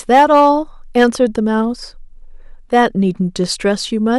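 Hard clipping hits the speech three times: 0.13 to 0.49 s with about 4 dB of overdrive, 0.97 to 1.23 s at about 5 dB, and briefly 2.76 to 2.86 s at about 1 dB. The peaks exceed what the signal path can pass and are sliced flat, adding high harmonics heard as a harsh, crackly edge. Unlike gentle saturation, the onset is abrupt, the added fizz is bright, and the third event sounds mildest.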